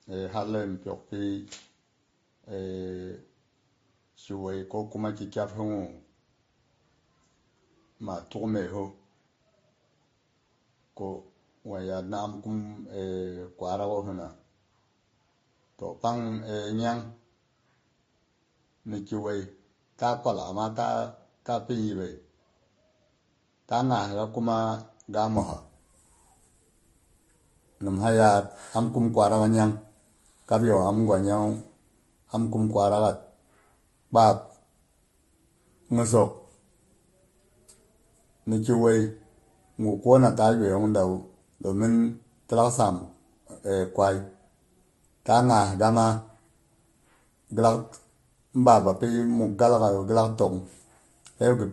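It's a speech recording, and for the first stretch, from the start to about 25.37 s, it sounds like the input switched to a poorer device. The top end stops at around 7.3 kHz, so it's dull, it sits roughly 5 dB quieter, and there's a faint new noise floor somewhere around 45 dB down. At 25.37 s it clears up abruptly with no gap, which is what you'd expect if the system likely swapped microphones or dropped out of a headset call profile and back. On top of that, the whole clip carries the mixed artefacts of transcoding between lossy codecs. It sounds like a Vorbis encode at around 41 kbit/s that was later squeezed through MP3 at around 43 kbit/s. Each pass re-spends its bits on the previous pass's damage and adds its own, and there's nothing above about 11.9 kHz anywhere.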